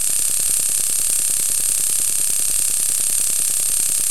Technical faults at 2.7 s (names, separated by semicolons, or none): periodic USB or driver dropouts